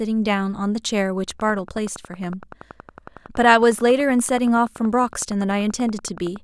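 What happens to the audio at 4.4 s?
At 4.4 s the audio is inside a train of clicks running from 1.31 s to 6.37 s. An outside source, likely interference from nearby equipment or a faulty connection or power supply, injects a short pulse into the signal 10.7 times per second at a steady spacing. That makes around fifty near-identical clicks, peaking at roughly the level of the speech itself. The result is a regular, insistent ticking laid over the talking and heard in the pauses between phrases too.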